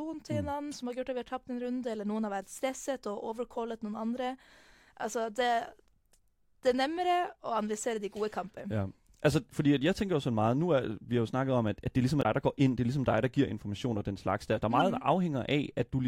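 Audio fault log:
0.72 s, 12.19–12.25 s, 14.79–14.81 s: damaged data in a compressed stream. Each is brief, the middle one between "at at det ligesom" and "der går ind det". Corrupt bytes throw the decoder off. It loses sync, then resumes at the next valid frame.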